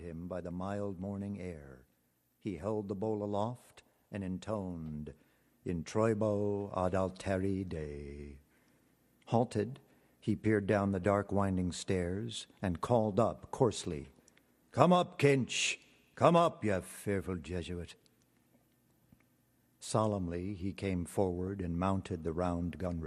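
A dull, gurgling, granular texture runs throughout, with upper bands dropping out and flickering. This is likely MP2 compression at a rate near 80 kbps, starving sub-bands of bits. From 1.63 to 1.68 s, and again briefly at 11.03 s, short blips of noise appear in single sub-bands. This DAB burbling comes from a small fraction of a percent of bit errors getting past the error correction into the MP2 audio data.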